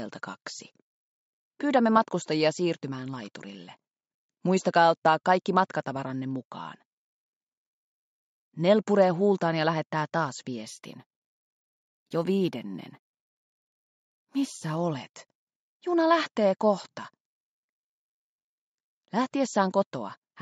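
From 10.67 to 14.77 s the audio has imaging from linear upsampling. Faint mirror images, roughly 30 dB down, fill 8 to 16 kHz. This fits a 16 kHz source.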